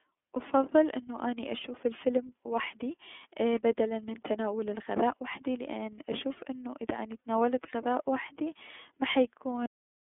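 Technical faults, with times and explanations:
Throughout: iLBC codec. The speech is confined to a narrow telephone band of roughly 200 Hz to 3.5 kHz, with nothing above 3.7 kHz, and has a plainly audible rough, synthetic edge. Each 30 ms frame's excitation is coded independently, which fits iLBC's 13.33 kbps mode. Unlike a plain low-pass filter or G.711, the roughness comes from this frame-by-frame coding of the excitation, not just from the missing top end.
9.66 s: cut-off end. The speech stops abruptly in the middle of a sound and drops straight to digital silence for the rest of the clip, with no decay or reverb tail. The final buffers were never written or played out. Unlike a fade or a natural pause, the signal vanishes instantly to silence rather than trailing away.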